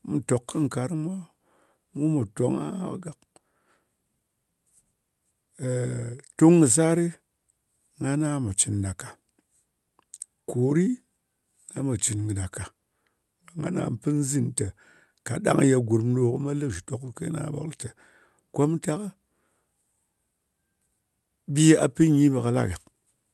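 No technical faults can be heard anywhere in this speech recording. It has come through a WebRTC call path whose codec stops the high end at about 12 kHz, a bandwidth that fits Opus at a generous bitrate, with only its usual coding noise.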